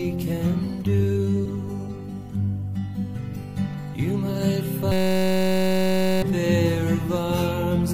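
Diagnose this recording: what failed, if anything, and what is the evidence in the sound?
A brief glitch at 1.44 s points to damaged data in a compressed stream at the codec or storage stage. The decoder misread corrupted frames, lost sync and skipped forward to the next valid frame header.

From 4.92 to 6.22 s the sound collapses into a steady buzz at 188 Hz, a 5.33 ms fragment repeating over and over. This is a system hang loop at the driver or buffer stage, which fits a 256-sample buffer. The host froze while the hardware kept replaying the same ring buffer, and about a second and a half of real audio never arrived.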